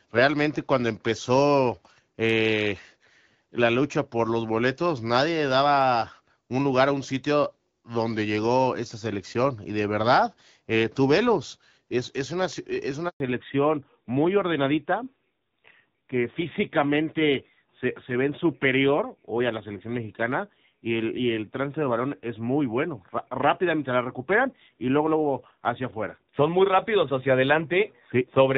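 At 13.08 s, just after "es una es", a handover gap silences the speech for 120 ms while the call switches networks and no frames arrive. From 13.20 s to the end, a fallback to narrowband removes everything above 4 kHz, so the speech turns duller and rougher than the earlier AMR wideband (HD Voice) sound. That fits a drop to narrowband AMR near 7.4 kbit/s.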